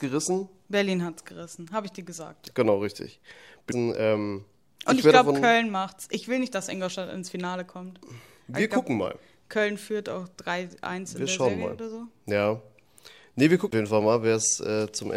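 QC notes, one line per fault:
3.72 s and 13.71 s, CD skip: a tick marks a very brief mute, a few milliseconds at the first and about 20 ms at the second. Play then resumes from a different point, because the laser jumped onto another turn of the disc's spiral.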